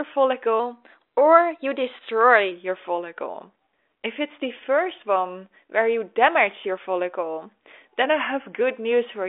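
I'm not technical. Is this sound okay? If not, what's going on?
No. From 0.60 to 2.51 s the speech runs about 6% fast and sits roughly a semitone sharp, then snaps back. From 8.04 to 8.61 s it drops about 6% slow and a semitone flat. That's a drift correction step, likely software syncing two clocks by nudging playback speed.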